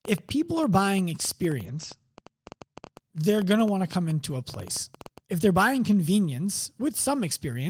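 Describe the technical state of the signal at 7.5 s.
At 7.5 s the speech signal is intact, with no audible technical fault at that moment.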